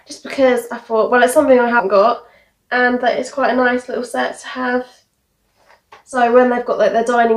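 At 1.79 s and again at 6.12 s the sound lurches forward. These are compressed frames skipped: the first jump loses about a tenth of a second and the second about half that, which fits whole 10 ms frames being dropped.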